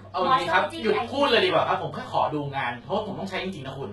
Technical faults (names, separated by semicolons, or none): HE-AAC compression